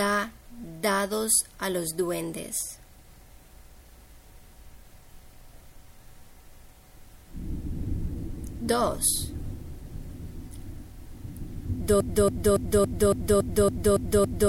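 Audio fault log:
12.00–14.48 s, broken-record loop: a 280 ms fragment repeats exactly nine times to the end, likely a stalled stream resending its last piece.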